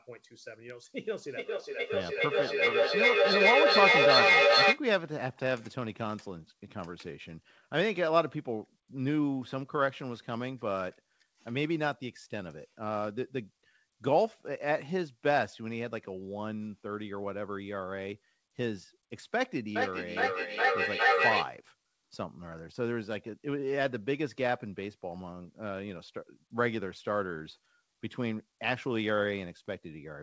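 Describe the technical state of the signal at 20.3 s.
At 20.3 s the speech is caught in feedback echo between two devices, running from 19.76 to 21.52 s. A second device in the room replays the call, and its sound reenters the first microphone, which that microphone's echo canceller cannot remove. The repeats come round roughly every 0.4 s, thinner and more ringing each pass. Unlike a single room echo or reverberation tail, they pile up rather than fade, peaking at about 4 dB above the direct speech.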